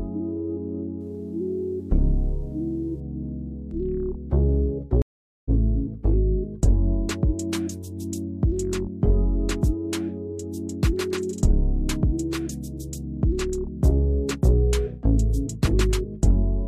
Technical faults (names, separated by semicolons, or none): video or display buzz; stream reconnect